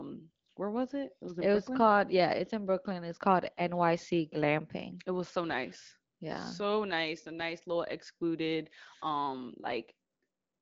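Nothing is technically wrong with this speech signal: it has passed through an AMR wideband (HD Voice) codec working normally at what sounds like one of its higher rates, with only light coding texture and no content above about 7.2 kHz, as that codec's bandwidth implies.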